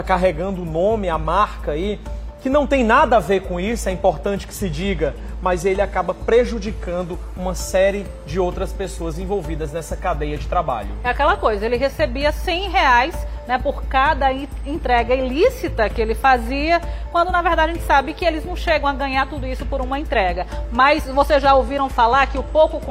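At 4.46 s the treble goes dull and a gritty hiss creeps in, lasting until 7.27 s. That's a Bluetooth SBC bit pool drop: starved of bits, the top sub-bands get few or no bits and the rest quantise coarsely, which fits a pool halved to about 14, roughly 108 kbps. It recurs from 21.15 s to the end.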